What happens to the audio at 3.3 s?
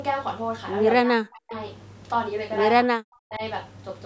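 The speech drops sharply, by around 40 dB, from 2.88 to 3.42 s. This is likely speech suppressed in double talk, with the echo canceller muting overlapping speech.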